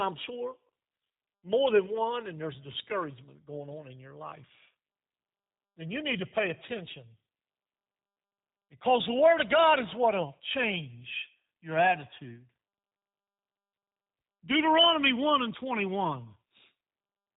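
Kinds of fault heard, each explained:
G.729 codec: the speech is rebuilt from a vocal tract filter, pitch predictor and sparse pulses, which fits an 8 kbit/s stream, so it sounds plainly rough and synthetic. On a spectrogram, energy stops sharply around 3.8 kHz, leaving nothing above throughout.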